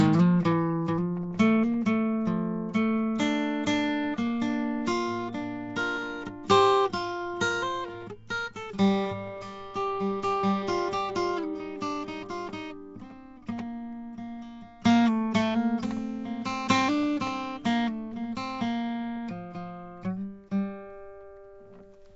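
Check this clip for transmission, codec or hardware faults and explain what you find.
There's one fault, and it runs the whole way through: Nellymoser compression, likely from Flash's old low-bitrate codec. It coarsely quantises each short block and fills empty bands with noise, so the music sounds hissy and smeared, with nothing above 7.7 kHz.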